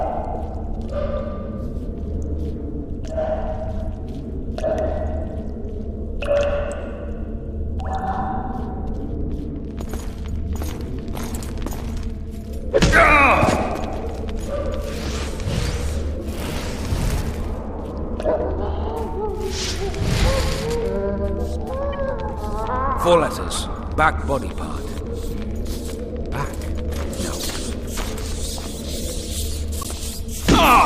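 Corrupt frame decoded at 21.93 s, then again from 29.81 to 29.86 s: flipped bits in the compressed data were decoded anyway, so misread gains and codes scatter energy into wrong frequencies, giving a short chirp, squeak, blip or burst of noise, first about one frame long, then roughly two.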